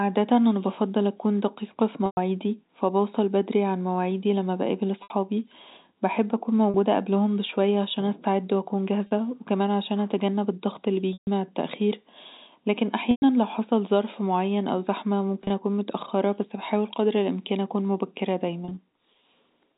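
Packet loss with pitch repetition occurs eight times: 2.06 s (110 ms, after "بفضل أكون دقيقه في"), 5.03 s (70 ms), 6.70 and 9.07 s (40 ms each), 11.13 s (140 ms, before "مع التاخير"), 13.11 s (110 ms), and scattered 30 ms runs at 15.42 and 18.65 s. The last pitch period is looped over each gap, so short losses buzz as held tones and longer ones fade out instead of dropping to hard silence, unlike a plain dropout.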